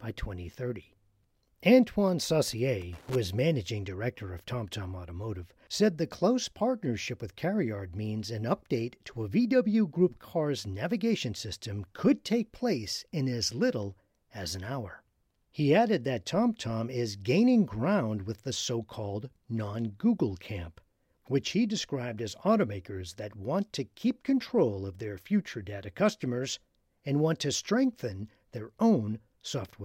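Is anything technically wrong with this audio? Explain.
Yes. From 2.81 to 3.15 s, just before "is managing director of", the speech is hit by loose connector crackle lasting about a third of a second. A worn or dirty contact in the signal path is making and breaking intermittently, so the audio is chopped on and off in rapid succession, and any DC present on the line turns each break into a pop. The result is an irregular, scratchy burst of crackle laid over the speech.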